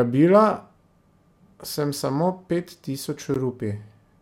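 The clip is speech with a gap at a join of encoded pieces at 3.34 s. A brief 14 ms silence cuts in, smeared at its edges. Separately encoded sections were joined with their encoder delay and padding left in.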